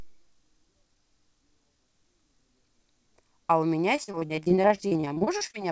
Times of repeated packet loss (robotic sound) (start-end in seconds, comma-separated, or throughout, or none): 3.96-5.55